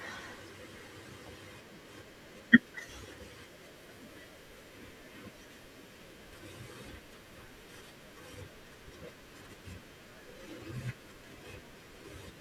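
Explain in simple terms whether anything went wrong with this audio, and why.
Two quick glitches at 2.35 s and 7.81 s are damaged data in a compressed stream. A bit of the compressed file got corrupted, so the decoder misread it and briefly lost its place, giving a tiny chirp or blip in the speech.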